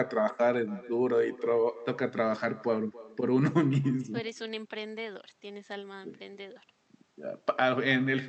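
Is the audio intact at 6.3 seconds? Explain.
No. At 6.3 seconds, as throughout the clip, there is echo with no canceller. The far end's microphone picks up its loudspeaker, and the speech returns roughly 300 ms later. The repeat sits about 20 dB below the speech and sounds thinner.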